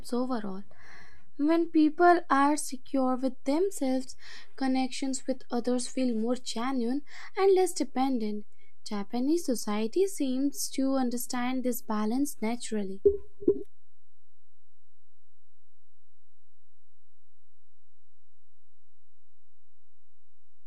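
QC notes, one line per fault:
Throughout: DC offset. The whole speech waveform sits on a constant shift away from zero, at about -33 dBFS, so the signal swings around a displaced centre line rather than around silence. The shift itself is inaudible, but it shows as steady energy at 0 Hz at the very bottom of the spectrum and eats into headroom on one side, bringing one polarity of the peaks closer to clipping than the other.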